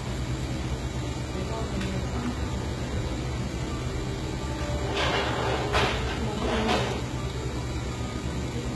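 Throughout the clip, the likely cause is heavy HE-AAC compression. The coder keeps only the lower spectrum and fills in the treble by copying lower bands upward under a coarse envelope, and the damage is severe enough to suggest a bitrate around 16 kbps. The top end sounds synthetic, with a gritty, metallic sheen where the rebuilt harmonics fail to line up with those below, and nothing at all above about 11.8 kHz.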